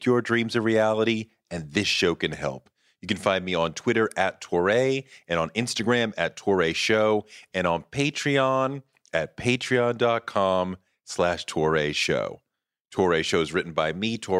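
A speech recording with nothing technically wrong with it.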